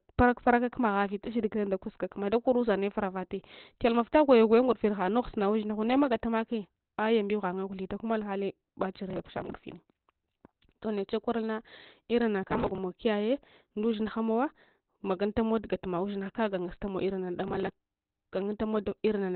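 Throughout the speech, nothing is present above 4.3 kHz and the voice sounds muffled, hoarse and heavily degraded, with the narrowband character of a speech-mode codec. This is likely Opus compression running in SILK mode at a very low rate, around 12 kbps.

At 9.10–9.53 s, 12.43–12.78 s and 17.48–17.74 s, processor overload crackle cuts in as gritty tearing. Dozens of repeated missed deadlines, consistent with a buffer of roughly 3 ms, each drop a short slice of audio, leaving hard-edged gaps that stop once the load clears.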